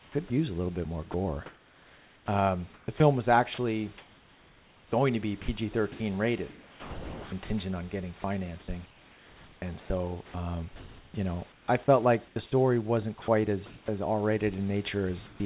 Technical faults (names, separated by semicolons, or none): sound chopped by the voice detector; sound dropped by the voice detector; comfort noise in place of the background; onset clipped by the voice detector